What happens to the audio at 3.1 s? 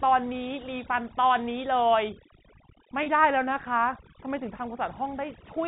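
Just before that point, from 3.03 to 3.06 s, there is packet loss with pitch repetition. About 30 ms of audio, consistent with a single lost packet, is bridged by repeating the last pitch period, which comes through as a brief held, buzzy tone before the speech resumes.

Overdone noise removal also runs through this stretch and the rest of the clip. The suppressor is set too aggressively and pulls frequency bands near its noise estimate far down, which leaves a lowered background broken into twinkling specks. All of this sits within the 4 kHz telephone band of the G.711 coding.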